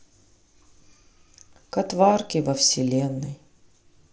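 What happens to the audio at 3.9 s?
Nothing goes wrong at 3.9 s: the audio is intact there, carried through the Bluetooth mSBC headset link with no fault at that point.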